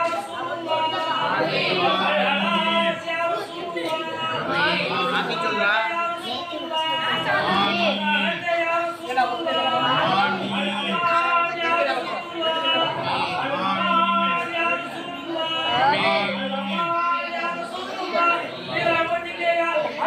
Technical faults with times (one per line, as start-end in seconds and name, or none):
none